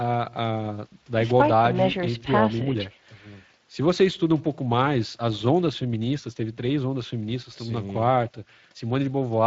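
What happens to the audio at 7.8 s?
Speex codec damage runs through the whole clip, including 7.8 s. This CELP speech coder has too few bits for the excitation signal, so the speech sounds noisy and hoarse. At this setting near 20 kbps, the band above 8 kHz, where present, is only a shaped noise fill.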